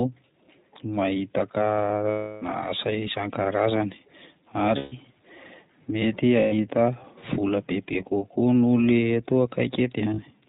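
Speech that sounds band-limited and slightly rough and synthetic throughout, with nothing above 4 kHz, is the signature of the iLBC codec. This narrowband VoIP coder encodes each short frame's excitation independently, and the plainly audible damage fits its 15.2 kbps, 20 ms frame mode. At 2.10–2.44 s, 4.78–4.94 s, 6.40–6.54 s and 10.14–10.20 s, lasting 320, 140, 120 and 40 ms, the sound becomes a held, buzzy, breathy vowel. These are lost iLBC frames, concealed by repeating the last pitch cycle with added noise. Because the frames stand alone, the sound recovers almost at once.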